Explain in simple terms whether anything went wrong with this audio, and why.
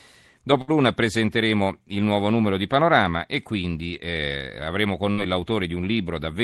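A burst of packet loss happens twice in this speech, at 0.61 to 0.71 s and again at 5.12 to 5.20 s. During a call, the sound travels in small packets. A short run of them never arrived in time, so the receiving end stretched the last sound it had and let it fade, which you hear as a brief buzz or hiss. When the speech picks up again, roughly 60 ms of it has been skipped.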